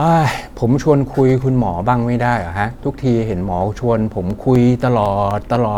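From 4.30 to 5.56 s, periodic USB or driver dropouts tick through the speech every 0.25 s, about seven times, as a recurring stall in the bus or driver blanks roughly 2 ms with silence. The strict spacing sets them apart from random clicks.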